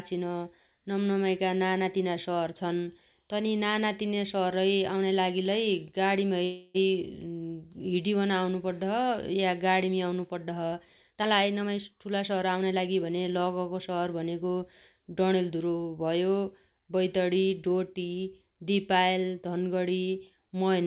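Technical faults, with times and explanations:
6.44 to 6.76 s, call audio freeze: Packets were likely held up in transit, so the jitter buffer ran dry and the receiver had nothing new to play. For about 0.32 s the last fragment of speech is stretched into a fading buzzy tail instead of dropping to silence. When the packets arrive, playback resumes where it stopped, so no speech is lost, but everything after this point plays about 0.3 s later than before.
11.08 to 13.18 s, jitter buffer speed-up: The jitter buffer had built up more delay than it aims to hold, so the receiver repeatedly cut out short pitch-period-sized pieces to catch up, removing about 0.3 s in total. Over these two seconds the speech runs at about 114% of normal speed at unchanged pitch, so it sounds hurried, and it returns to its normal pace just before "लगगो शहर भनेगो".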